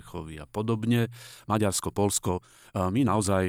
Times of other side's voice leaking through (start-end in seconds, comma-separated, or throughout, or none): none